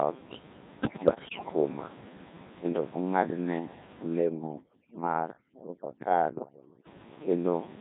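From the start the speech has that robotic, buzzy quality of the Codec 2 vocoder, consistent with its 1.6 kbit/s mode. Only pitch, voicing, energy and a rough spectral shape get through, and the decoder rebuilds the voice from sine waves. The coding damage is heavy, and the room noise sitting about 19 dB under the speech comes out smeared too.

Then from 0.8 to 1.52 s there's a burst of bit errors on the digital voice radio, sounding like roughly one bit in ten flipped. With so few bits per frame, each wrong one throws off the pitch, level or tone, so that stretch jumps around and collapses into warbly, bleepy gibberish.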